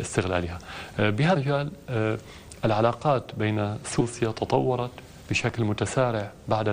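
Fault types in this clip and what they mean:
Damaged data in a compressed stream: corrupted bytes in the encoded file left the decoder misreading frames and losing sync while it hunted for the next valid frame header, giving two brief disruptions in the audio, at 1.35 s and from 4.00 to 4.02 s.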